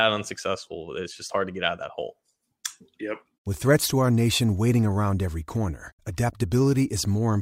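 No technical faults are audible anywhere in this speech recording.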